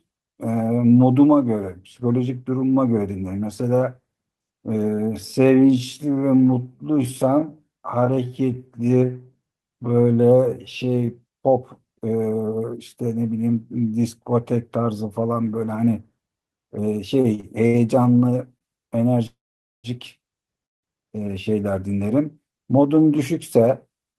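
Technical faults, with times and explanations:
4.90–11.08 s, time-stretched section: the pace drops to about 0.63× speed while pitch holds, so it drags, likely software stretching it to fit.
17.21–17.76 s, repeated stalls (stutter): four quick hiccups, longest 68 ms, about 167 ms padded in total as the buffer kept running dry; nothing's lost, it just drags.
18.58–18.63 s, short stall from a late packet: one sound gets held about 25 ms too long while a late packet catches up, then it carries on from the same place.
19.27–19.86 s and 20.66–20.85 s, call audio freeze: gaps of 572 ms and 173 ms, mostly dead silence (480 ms and 170 ms), likely packets held up in transit, then playback resumes where it stopped.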